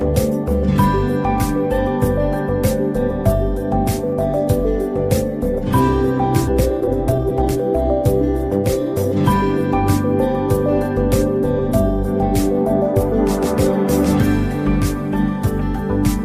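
A skip ahead occurs at 6.47 to 6.49 s. Playback jumps forward with no fill, and roughly a second of audio is simply missing, with the two sides butted together almost directly. That points to a stretch being dropped, in transit or when an overfull jitter buffer discarded it, while later audio was already queued, so the delay falls by about a second at a stroke. A jitter buffer speed-up follows from 6.61 to 7.56 s, where the audio runs at about 140% speed with unchanged pitch and sounds hurried. The receiver was still holding more audio than its target and trimmed short pitch-period-sized pieces repeatedly, removing something like 0.4 s in total to bring the latency back down.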